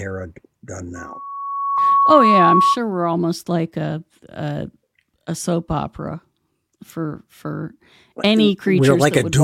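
A microphone picking up its own loudspeaker causes loudspeaker feedback squeal from 0.95 to 2.78 s: a 1.1 kHz tone swells over about a second to roughly 5 dB above the speech, ending before "we're almost like a". At 1.77 s, damaged data in the compressed stream makes the decoder lose frame sync, heard as a brief blip.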